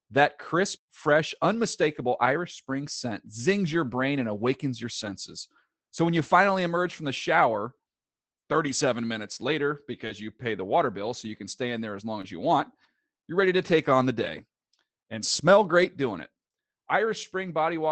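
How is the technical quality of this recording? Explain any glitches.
The speech has come through an Opus call link with its content ending near 8 kHz, which fits a stream of about 24 kbps. It carries several brief packet-loss glitches, none of them a true gap.

The lost packet rebuilt from error correction events fall at 3.65, 5.05 to 5.11 (40 ms, two packets), 6.15, 10.09, 12.23, 13.69 and 15.81 s. The others each last 20 ms. At each one the decoder played the low-bitrate backup copy carried in the following packet. These frames sound momentarily rougher and grainier. On a spectrogram they show as thin vertical slices with blurred harmonics and a noisier texture. The waveform stays continuous.

The short concealed packet loss events come at 10.07 to 10.11 s, between "minutes later" and "you pay the water", and at 12.21 to 12.25 s, between "in there as long" and "as you want you're". About 20 ms never arrived. 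The receiver extended the preceding sound and then crossfaded back, and the error-corrected copy covered the second half of each window. This is heard as a quick smear or wobble. On a spectrogram and waveform this shows as a short stretch continued from the sound just before it.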